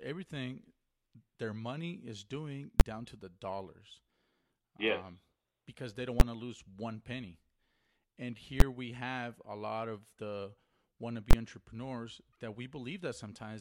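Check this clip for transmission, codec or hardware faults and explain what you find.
Four loud bangs in the speech, all from one fault: invalid numbers at full scale. They hit at 2.80, 6.20 and 8.60 s, each about 12 ms long, which fits a 512-sample block. A fourth runs from 11.31 to 11.33 s, about 23 ms, which points to a 1024-sample block. A calculation went infinite or invalid, so the output got pinned at full scale for the whole block. Because the blocks are that short, each one lands as a single sharp bang.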